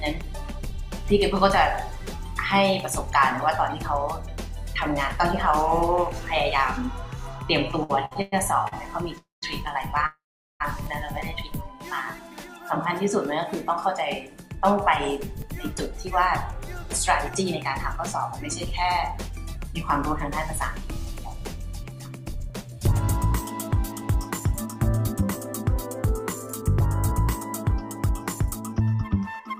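A burst of repeated stalls (stutter) runs from 7.83 to 8.74 s: the audio keeps catching for five short gaps, the longest about 107 ms, so roughly a third of that stretch is filled-in continuation of the last sound rather than fresh audio. It's packets trickling in slower than playback, draining the jitter buffer over and over, and the receiver bridges each gap before carrying on. Nothing's actually lost, it just drags and hiccups. Right after that come two call audio freezes. The first, at 9.18 to 9.44 s, holds the last sound for a moment and then drops to about 160 ms of silence. The second, at 10.06 to 10.62 s, does the same but stretches to about 410 ms of silence. Each time the audio picks up where it left off, so the clip gets about 0.24 s and then 0.54 s longer, with nothing skipped. The likely cause is packets being held up in transit until the buffer ran dry. From 14.28 s to the end there's a jitter buffer speed-up. 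Playback runs about 3% fast at unchanged pitch because the receiver keeps trimming tiny pitch-period-sized slices to burn off the extra delay that built up earlier. Altogether it shaves off roughly half a second, so that whole second half runs slightly fast.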